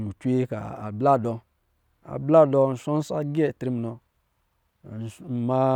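No technical faults can be heard anywhere in this speech recording. There is nothing in it to mark at any point in time.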